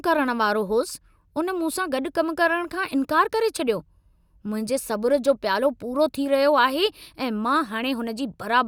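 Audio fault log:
No technical faults can be heard in the signal at any point in the recording.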